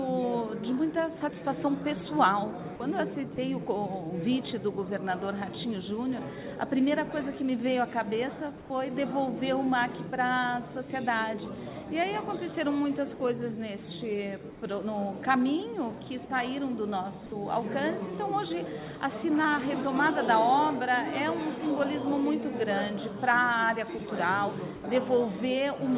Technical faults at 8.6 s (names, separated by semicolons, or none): comfort noise in place of the background